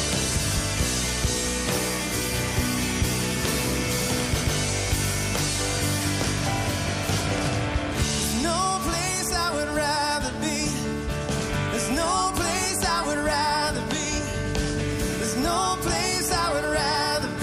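The audio has a repeated-frames fault at 4.39 to 4.53 s. A 139.3 ms block plays once more immediately after itself, causing an audible stutter that lengthens the clip by 139.3 ms. The duration fits a run of a few compressed frames being written or sent twice.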